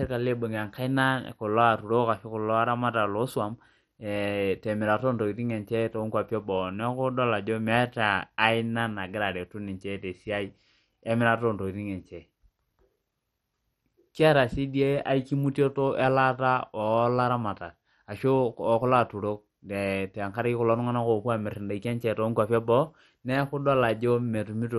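From start to finish the speech carries what is likely MP2 compression, and heavy at that: nothing survives above about 13.7 kHz, upper bands flicker in and out, and what remains sounds gurgly and grainy, which fits a starved rate around 56 kbps.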